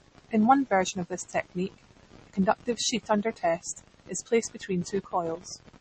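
From the start to the end of the speech, the treble stops dead at 8.3 kHz, leaving a flat, hard ceiling across the spectrogram. Below it, weak high components flicker in and out as isolated blocks that come and go between frames. The plainly audible watery swirl on s sounds and the blurred consonant onsets point to MP3 compression as the likely cause, at a low bitrate in the region of 33 kbps. The encoder ran short of bits, discarded the top band and dropped quieter detail.

Sample clock jitter is present throughout as well. The converter's clock wavers by around half a microsecond, so each sample is taken slightly early or late. The resulting error follows the waveform's slope, peaking on loud, bright passages and fading in the pauses. It is heard as a faint grainy hiss riding on the speech, roughly 50 dB below it. On a spectrogram, this appears as a thin noise haze that thickens under energetic high-frequency sounds and clears in the gaps.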